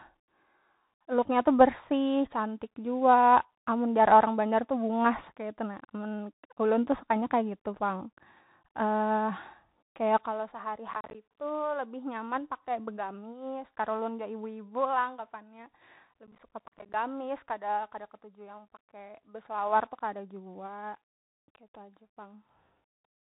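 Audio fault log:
Throughout: Bluetooth CVSD headset codec. The speech is cut off above 3.8 kHz, so it sounds boxed and thin. A grainy hiss sits underneath. The s sounds turn scratchy because the one-bit step cannot keep up, which fits a 64 kbps CVSD stream.
10.88–11.15 s and 16.27–16.94 s: processor overload crackle. A gritty tearing rides on the speech. Each short gap is silent, around 10 ms long, and many come in a row. Missed buffer deadlines leave these hard-edged holes until the load passes.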